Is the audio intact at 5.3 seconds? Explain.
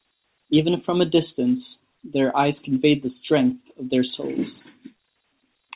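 Yes, the audio is intact at 5.3 seconds, with no fault at that moment beyond the narrow telephone band of its A-law G.711 coding.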